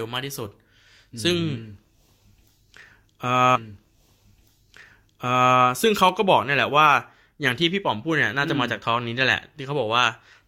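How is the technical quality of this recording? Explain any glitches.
Two glitches stand out in this speech recording: a repeated passage and a single click.

From 3.55 to 5.55 s, two seconds of speech play a second time, with a small blip where playback jumps back. This is a stream segment repeated: the player fetched or queued the same chunk of audio twice, adding 2 s to the recording.

At 6.09 s there is one sharp click, a thin line straight up the spectrum. The likely cause is dropped samples, a handful lost, only a fraction of a millisecond, so the waveform jumps abruptly without any sound going missing.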